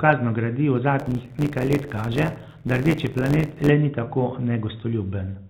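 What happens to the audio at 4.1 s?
Packet loss with pitch repetition occurs just before that moment, from 4.04 to 4.06 s. About 20 ms of audio, which fits a single lost packet, failed to arrive, and the receiver filled the hole by repeating the last pitch period of the speech. Because the gap is so short, the patch doesn't fade to silence. It sounds like a brief, slightly held, buzzy tone before the speech resumes over the band-limited G.711 telephone channel.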